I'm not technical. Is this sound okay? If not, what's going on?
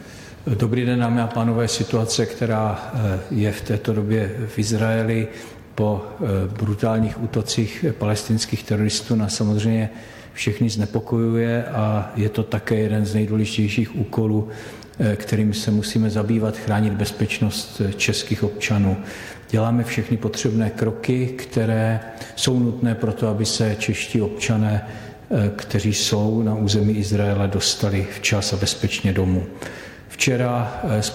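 Yes, this one's fine: nothing in it skips, crackles, cuts out or sounds broken, so there's nothing to worry about.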